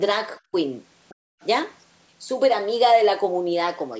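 A speech recording with two echo-canceller problems clustered around 1.1 to 1.5 s. At 1.09 to 1.15 s and again at 1.41 to 1.46 s, a faint second voice briefly surfaces, roughly 30 to 35 dB under the main talker. This is likely the other side's voice leaking through: far-end audio from the loudspeaker that the echo canceller failed to fully subtract from the microphone signal. Between those two scraps, from 1.15 to 1.4 s, the background is gated by the echo canceller. The room sound drops by as much as about 40 dB while the canceller clamps the microphone during loudspeaker playback, then recovers once it releases.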